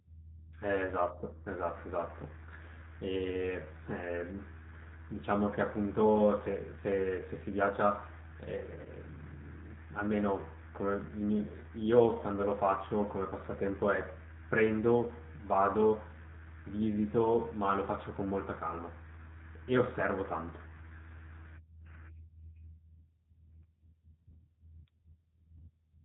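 The speech runs through the G.729 codec for its whole length, and the damage is plainly audible. Everything above 4 kHz is missing, so sibilants sound dull, and the voice has a rough, slightly synthetic grain because it is rebuilt from a vocal tract filter, a pitch predictor and a handful of pulses per frame at 8 kbit/s. That grain and the hard 4 kHz ceiling set it apart from a plain low-pass or narrowband telephone filter, which would muffle the sound without making it artificial. At 8.81 s there is VoIP packet loss concealed by the speech codec, running to 8.89 s. About 40 ms of signal was lost, which fits two 20 ms packets. The decoder filled the gap by stretching its last pitch and filter into a short buzzy tone or coloured noise that fades out, and the voice stays weak or distorted for a moment after the audio resumes because each frame builds on the one before. That smeared, decaying fill is what distinguishes it from a dropout to silence or a hard click.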